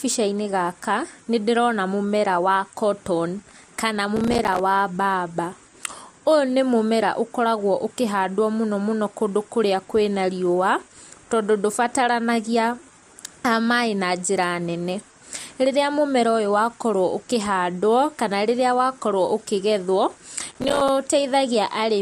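A gritty burst of crackle tears through the speech from 4.17 to 4.60 s and again from 20.52 to 20.89 s: processor overload crackle, where a string of short buffers, around 5 ms each, missed their deadlines and dropped to silence.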